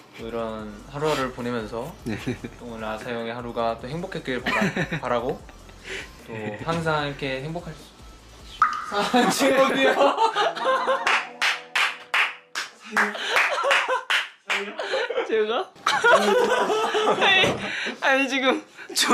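At 11.76 to 11.80 s, two adjacent chunks of about 21.3 ms each play in swapped order, a case of chunks out of order: the one that should come first arrives one chunk late and plays after its successor. The 43 ms span sounds briefly jumbled, with three hard joins. Unlike a dropout, no audio goes missing, and unlike a repeat, nothing plays twice. The material is all present, only scrambled in sequence.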